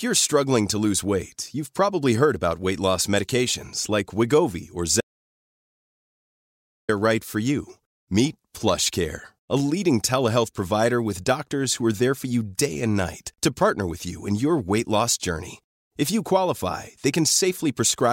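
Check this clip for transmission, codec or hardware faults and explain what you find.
One fault is present. Audio dropout to silence at 5.01–6.89 s: the input was likely cut while zeros kept recording, so speech drops into dead silence, with no room tone, until "right for you".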